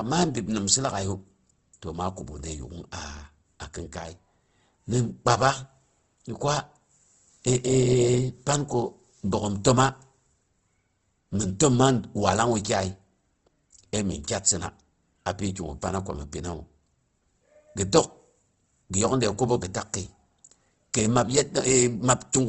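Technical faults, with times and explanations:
Throughout, Opus compression: the speech comes across rough and grainy, with a noisy fizz where fine detail should be, and nothing above 8.2 kHz. That's likely a low-rate Opus encode in music mode padding starved bands with noise, which fits about 16 kbps.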